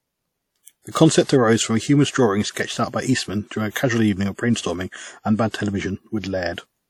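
Throughout the speech, plainly audible WMA compression artefacts, likely from a transform encoder at around 48 kbps, leave ringing, washy quantisation noise and nothing above 18.3 kHz. From 1.24 to 1.29 s, pre-echo smears block noise about 56 ms ahead of an attack, so a short hiss precedes it and softens its onset.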